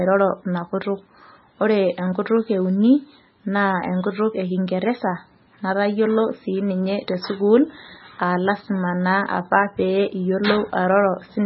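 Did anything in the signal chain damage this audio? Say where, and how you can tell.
Yes, at the codec stage: heavy MP3 compression, likely at a very low bitrate near 18 kbps. Throughout the speech nothing survives above 5.6 kHz, and starved frequency lines flicker between frames, giving a watery, swirly texture, chirpy sibilants and smeared consonant onsets.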